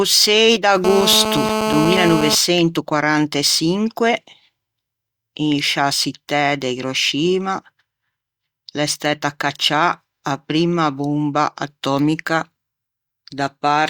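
A speech recording with one fault. From 0.85 to 2.35 s a hard, raspy buzz sits over the audio. It is GSM phone buzz. A 2G phone nearby is on a call and transmits in bursts about 217 times a second. The audio circuit rectifies those radio pulses. The result is a 217 Hz tone with many harmonics, unrelated to the speech. It holds steady throughout, at about 2 dB below the signal.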